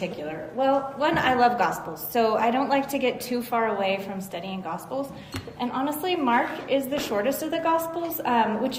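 Nothing stood out as a technical problem on listening to this audio.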